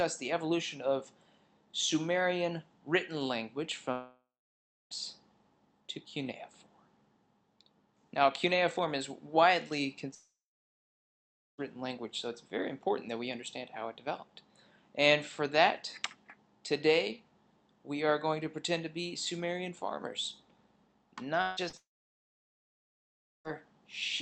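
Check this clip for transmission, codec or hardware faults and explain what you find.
Four long network dropouts and one short concealed packet loss break the audio, all heard through a call codec whose dull top end suggests an Opus-style path limited to about 8 kHz.

Long network dropouts at 3.91–4.94 s, 10.15–11.61 s, 21.42–21.60 s and 21.77–23.55 s: the last sound stretches into a fading buzz. In the first, second and fourth this gives way to silence lasting about 0.65 s, 1.25 s and 1.6 s. The audio then resumes with that stretch gone, likely because packets stopped arriving for up to about 1.7 s. Unlike a brief concealment, the gap ends in silence. The 21.42 s dropout is the exception, since the fill covers its whole 0.16 s with no silence.

Short concealed packet loss at 21.69–21.76 s: about 40 ms never reached the decoder. It was patched by extending the preceding sound, so it is heard as a quick smear between dropouts rather than a silent gap.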